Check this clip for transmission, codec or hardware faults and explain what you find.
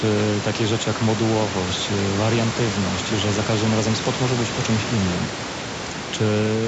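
No transmission, codec or hardware faults turn up in this speech clip.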